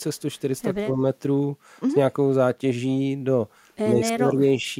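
From 0.78 to 1.02 s the speech suddenly dips by about 20 dB, and again from 3.91 to 4.65 s by about 15 dB, the second dip lasting roughly half a second. This is speech suppressed in double talk, likely an echo canceller mistaking the talker for loudspeaker echo and turning everything down. On a waveform the envelope caves in mid-phrase. On a spectrogram the energy fades across the band there.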